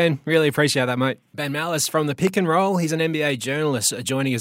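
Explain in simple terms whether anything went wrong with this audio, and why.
Nothing went wrong here.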